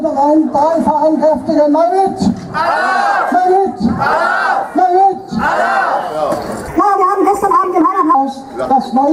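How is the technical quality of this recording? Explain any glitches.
There's one clear glitch: a section at the wrong speed from 6.68 to 8.15 s. That stretch runs 1.3 times too fast, so it jumps up about five semitones and sounds rushed and chipmunky, most likely from being played against the wrong clock.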